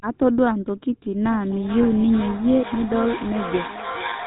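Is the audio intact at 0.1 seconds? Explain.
No. GSM full-rate codec coding runs throughout; its pulse-driven vocal-tract model makes speech buzzy and gravelly, and the spectrogram stops dead at 4 kHz.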